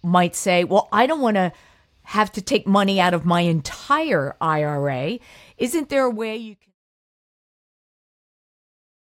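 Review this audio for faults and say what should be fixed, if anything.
Nothing in the speech signal needs fixing; its only level change is a deliberate-sounding smooth fade-out that begins around 6 s and reaches silence at 6.75 s, with no click or hard edge.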